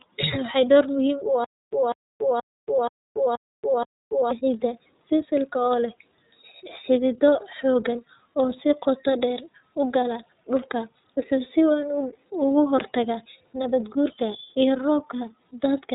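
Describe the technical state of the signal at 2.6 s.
At 2.6 s the signal is inside a stutter with silent gaps that runs from 1.44 s to 4.31 s. A burst of about 0.2 s (195 ms) repeats six times at an even 478 ms period, with 282 ms of digital silence after each repeat. The sound that should have played during that span is gone. The likely cause is a player or stream stall that replays its last buffered fragment at each retry and then runs dry. A network dropout would leave silence alone, and a stuck loop would repeat with no gaps. Here the identical fragment returns on a regular clock with true silence between.

Underneath, and through the whole clip, is iLBC codec damage that is plainly audible. Nothing passes above 3.8 kHz, so the speech sounds narrowband. It also has a rough, slightly synthetic grain, which fits iLBC's 30 ms frame mode at around 13.33 kbps, where each frame's excitation is coded independently of the one before. 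A plain low-pass filter would only dull the sound. It would not add this buzzy, artificial texture.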